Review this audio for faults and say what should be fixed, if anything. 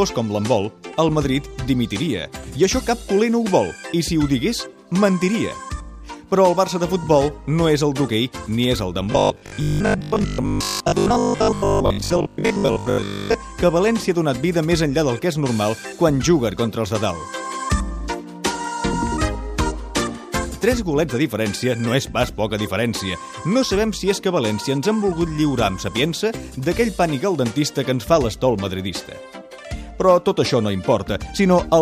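Robotic sound from repeated short buffers runs from 9.12 to 13.34 s as a rigid, metallic 50 Hz buzz, likely from the last 20 ms being replayed while most incoming audio is skipped. A spectrogram shows harmonics locked at 50 Hz spacing, and the waveform shows identical 20 ms cycles. Giving the audio path a larger buffer or steadier processing priority keeps new audio arriving in time and prevents it.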